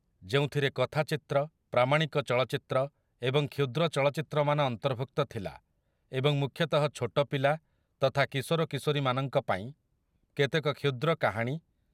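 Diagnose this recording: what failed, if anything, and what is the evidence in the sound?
Listening to the speech in this recording, nothing stood out as a failure at any stage of the chain.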